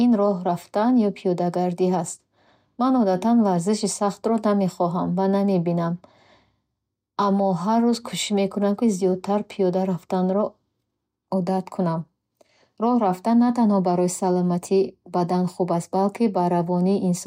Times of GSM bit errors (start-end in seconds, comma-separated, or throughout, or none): none